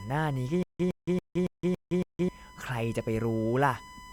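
A steady USB whine sits under the speech from start to finish. It is a fixed tone at 1 kHz, strongest right at that pitch. It lies roughly 20 dB below the speech. The tone comes from current drawn by the USB bus in 1 ms frames. That pulsing leaks into the audio through shared power or ground. The pitch never moves.

From 0.63 s to 2.29 s there is a stutter with silent gaps. A short burst of about 112 ms plays, then about 167 ms of dead digital silence follows. The cycle repeats every 279 ms, six times in all. The same fragment returns each time at an even pace. The likely cause is a stalled stream that replayed its last chunk at each retry, then ran empty. The speech meant for that span is gone.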